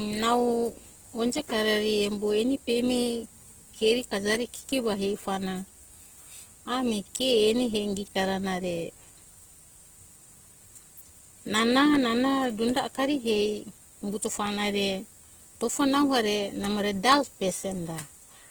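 From start to finish, the speech carries plainly audible coding damage. It is likely Opus compression, in its music (CELT) mode. The full band survives, with content reaching about 20.1 kHz. But the bits are spread thin, which fits a rate near 16 kbps. The encoder keeps each band's energy and fills starved bands with folded or noise-like content. So there are few swirling holes. Instead, tonal parts of the sound turn rough, grainy and noisy.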